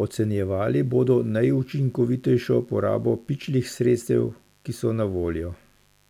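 From the first moment to the end, a mains buzz sits under the speech at roughly 40 dB below it. Sharp switching spikes from a dimmer, rectifier or unshielded line, recurring twice per 50 Hz cycle, leave a steady, raspy edge rather than a smooth hum. On a spectrogram it appears as a ladder of thin horizontal lines at 50 Hz multiples, continuing well up into the kilohertz range and staying unbroken through pauses between phrases.

At 4.02 s, right after "bodo najučinkovitejšo porabo pičlih" and just before "ki so", there is an overlap between stream segments. Two segments had overlapping time stamps, so the player discarded about 11 ms of sound that was never actually duplicated, and the waveform jumps abruptly across the gap. It is heard as a small click or tiny skip. On the waveform it shows as a sudden discontinuity, and on the spectrogram as a thin vertical stripe. Its position fits a boundary between 4-second segments.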